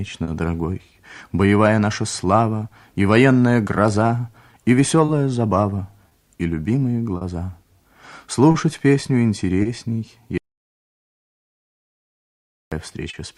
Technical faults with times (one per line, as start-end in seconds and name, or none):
0.00-13.38 clock drift between sender and receiver
0.23-0.29 short stall from a late packet
1.50-4.76 repeated timing corrections
5.05-7.23 scattered short gaps
8.51-8.56 short stall from a late packet
9.62-9.67 short stall from a late packet
10.38-12.72 audio dropout to silence
13.10-13.15 short stall from a late packet